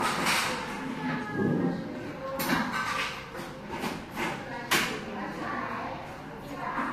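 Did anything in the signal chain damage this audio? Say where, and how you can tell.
Yes, at the codec stage, throughout the clip. Nothing sounds above 15.7 kHz, and the texture carries different kinds of coding damage at once. That mix points to transcoding between lossy codecs, likely a low-bitrate Vorbis encode passed through Opus and then Vorbis again. A single low-bitrate encode would show one consistent artefact character. Here each re-encode spent bits on the previous damage and added its own, while the lowest cut-off survived the chain.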